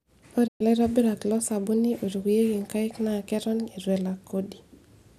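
At 0.46 s the speech drops out in a digital broadcast dropout lasting until 0.62 s. The receiver stopped getting usable frames and muted its output, fading down over about 20 ms rather than cutting hard. Roughly 120 ms of programme is simply gone, which fits about five lost frames. The speech resumes further along, not where it left off. Unlike an analogue fade, there is no hiss or noise in the gap, only clean silence.

At 3.31 s a bit error spike produces a single sharp tick. One sample jumped by a power of two and immediately returned, so the click is extremely brief and broadband, with no relation to the pitch or loudness of the speech around it. That separates it from a vinyl-style crackle or a buffer glitch. Those repeat, or leave a gap. This is one isolated spike in otherwise continuous sound.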